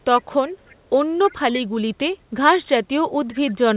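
A faint delayed copy of the speech returns at 0.18 to 0.24 s, 0.46 to 0.76 s and 1.26 to 1.35 s. It lags about 0.31 s behind and sits well below the direct speech. This is likely an echo leak: a far-end echo canceller let loudspeaker pickup through. The returned scraps are limited to 4 kHz, like the call path itself.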